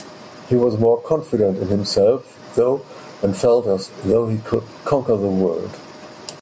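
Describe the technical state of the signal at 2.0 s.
At 2.0 s the speech shows gain pumping, present throughout: loud syllables are pulled down, with the gain swinging by around 15 dB, likely from excessive gain and a fast limiter. The waveform looks squashed, with loud and soft parts closer in level.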